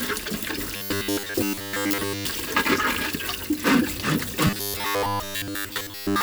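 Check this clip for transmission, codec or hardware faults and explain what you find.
There is one fault, occurring twice. From 0.76 to 2.25 s and from 4.47 s to the end at 6.2 s, the sound turns into a rigid, metallic 100 Hz buzz with robotic sound from repeated short buffers. The likely cause is audio arriving too seldom, so a roughly 10 ms snippet is replayed in place of most of the real audio.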